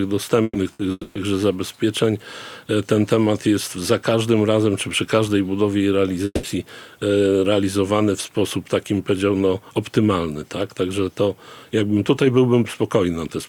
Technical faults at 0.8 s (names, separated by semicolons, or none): burst of packet loss